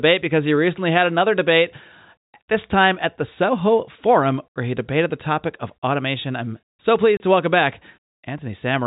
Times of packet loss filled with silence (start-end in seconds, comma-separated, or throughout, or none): 7.17-7.20